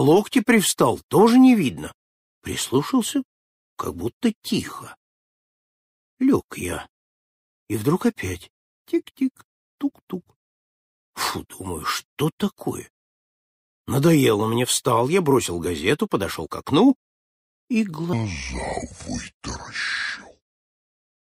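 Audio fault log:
18.13 to 21.32 s, section at the wrong speed: the final stretch drops to 0.678 times its proper speed, so everything drags and sinks by roughly seven semitones at once. Speed and pitch shifting together like that most likely means it was played against the wrong clock.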